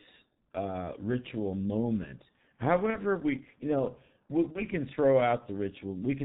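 Speech heard through the G.723.1 codec, heavily damaged throughout: nothing passes above 4 kHz, so the sound is muffled and hoarse, consonants smear, and the slow-updating voice model fits a rate around 6.3 kbit/s. VoIP packet loss concealed by the speech codec appears at 2.90–2.98 s and 4.52–4.61 s. The decoder fills each gap, consistent with one lost 30 ms frame, by extending the previous pitch and filter with falling gain, giving a brief fading smear and weakened sound just afterward.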